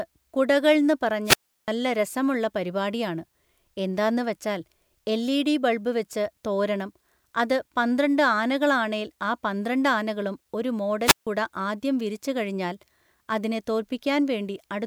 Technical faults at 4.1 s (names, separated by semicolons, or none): none